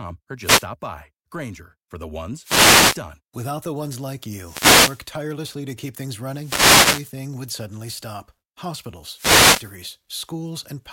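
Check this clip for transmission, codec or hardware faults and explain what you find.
The clip shows one fault, a wireless microphone noise hit, five times. The hits fall at 0.39 to 0.68 s, 2.41 to 3.01 s after "for the", 4.38 to 5.10 s, 6.26 to 7.23 s before "would suddenly stop", and 9.09 to 9.74 s. Each is a short swish of static over the speech. The FM radio link fades as reflected signals cancel. Receiver noise then rises and masks the speech until the signal recovers.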